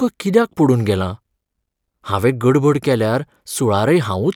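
No technical faults can be heard anywhere in the recording; the signal stays continuous and steady in level throughout.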